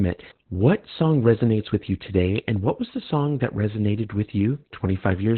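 Throughout this speech clip there is Opus voice compression: nothing remains above about 4.2 kHz, pointing to SILK in narrowband mode near 8 kbps, and the coarsely coded excitation leaves the speech muffled, hoarse and robotic, which a simple low-pass filter would not do.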